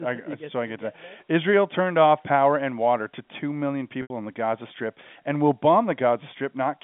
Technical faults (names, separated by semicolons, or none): packet loss with pitch repetition